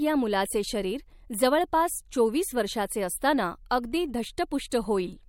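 Speech with pre-echo at 3.69 s, just after "जवळपास चोवीस वर्षाचे असताना", and at 4.70 s: a brief hiss about 13 and 18 dB up smears each attack, which fits a codec stuck on long, roughly 26 ms blocks.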